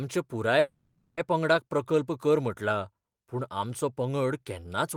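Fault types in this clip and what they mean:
Call audio freeze: at 0.59–1.20 s the last sound hangs as a fading buzz or hiss, likely jitter-buffer underrun; spectrogram shows smeared bands, then speech continues uncut.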